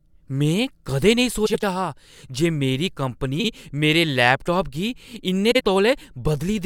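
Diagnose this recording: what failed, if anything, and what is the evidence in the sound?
The failure is at the network or delivery stage: frames out of order, three times. From 1.46 to 1.64 s the speech turns into a garbled flutter, and the same happens more briefly from 3.40 to 3.49 s and from 5.51 to 5.61 s. Two adjacent blocks, about 85 ms each in the first case and 43 ms in the others, were decoded in swapped order. That fits runs of a few codec frames arriving out of sequence. No audio is lost, only rearranged.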